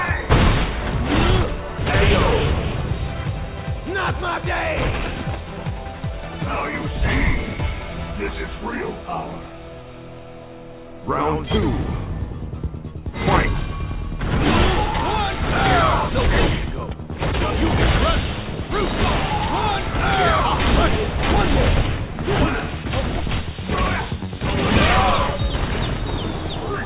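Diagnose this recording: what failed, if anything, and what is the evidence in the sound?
A jitter buffer speed-up in the receiver's buffer stage runs the sound 9% fast from 2.70 to 4.44 s and 10% fast from 4.99 to 6.39 s, each time dropping roughly 150 ms of whole pitch periods. On a spectrogram, the harmonics keep their frequency while events crowd together.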